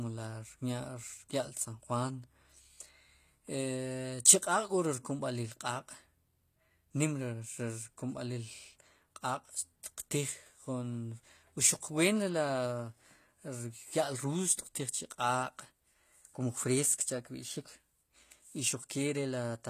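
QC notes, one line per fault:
throughout HE-AAC compression: The speech was likely coded with HE-AAC at a low bitrate, consistent with around 24 kbps. The treble is rebuilt from copied lower bands, so sibilants sound gritty and lispy, the damage is plainly audible, and nothing reaches above 14.9 kHz.
4.42 s pre-echo: A sharp attack falls late in a transform block, so quantisation noise sized for the loud onset is spread back into the quiet moment before it. A short hiss of about 10 ms leads the attack, which sounds softened and smeared.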